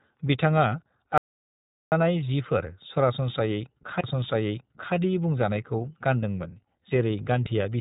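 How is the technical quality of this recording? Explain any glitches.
The recording has three technical problems: plainly audible narrowband codec coloration throughout, one long cut to dead silence, and one brief skip.

The iLBC codec damage runs through the whole clip. Nothing above about 3.8 kHz survives, and the speech sounds rough and slightly synthetic. Each short frame, which fits 20 ms, is coded on its own, and that grainy texture fits the 15.2 kbps mode. Plain band-limiting alone would sound dull rather than gritty.

The audio dropout to silence runs from 1.18 to 1.92 s, losing about 0.74 s. It is most likely a lost input feed with silence written in its place. The gap holds no room tone at all, which separates it from a quiet pause, and the speech cuts off and resumes mid-flow.

The CD skip comes at 4.01 s. It is a very short mute, a few tens of milliseconds, after which the speech continues from a different point. 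The laser jumped to another turn of the spiral. The sudden jump in content, rather than a plain gap, is what sets it apart from a dropout.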